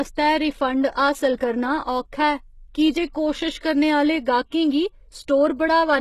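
HE-AAC compression, present for the whole clip: the damage is heavy and points to a very low bitrate, around 16 kbps, and likely comes from HE-AAC with spectral band replication. Only the lower spectrum carries real detail, while the treble above it is patched together from copied lower bands under a coarse envelope. The speech keeps a top end, yet its s sounds come out gritty and metallic, and nothing at all remains above 12.3 kHz.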